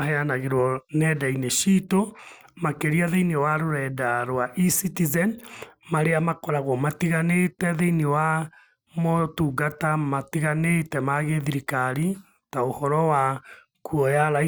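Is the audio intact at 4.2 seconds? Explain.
Yes, at 4.2 seconds the speech plays through intact, with no dropout, click, distortion or other fault to be heard at that moment.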